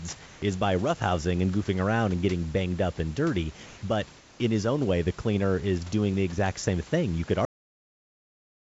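At 0.26 to 0.42 s, just before "is by roughhousing and", then 3.66 to 3.82 s after "banged up and dirty", and 4.18 to 4.40 s before "in his own way", the room background gives way to comfort noise. The pauses likely triggered discontinuous transmission, so the receiver filled them with steady synthetic hiss about 1 to 2 dB quieter. On a spectrogram these gaps look smooth and uniform, with none of the background's fine texture, and they sit below an 8 kHz ceiling from the G.722 path.

At 7.45 s the audio hits a cut-off end. It stops mid-sound and drops straight to digital silence with no decay. On the waveform, the trace ends abruptly at a flat zero line, and the spectrogram goes blank in one vertical edge.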